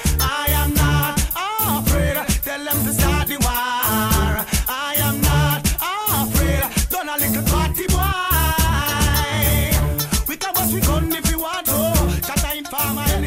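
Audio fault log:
0.0–4.85 s, mains buzz: faint raspy 50 Hz buzz, around 40 dB below the sound, from twice-per-cycle switching spikes; the spectrogram shows stacked harmonic lines reaching several kHz.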